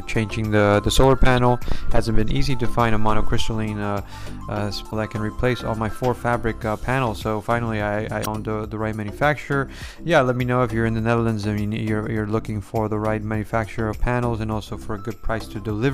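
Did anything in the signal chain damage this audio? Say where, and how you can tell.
Yes. At the codec stage, damaged data in the compressed stream produces three brief glitches: one at 1.37 s, then 4.87 to 4.93 s and 8.22 to 8.27 s. Corrupted bytes make the decoder misread frames, lose sync and hunt for the next valid frame header.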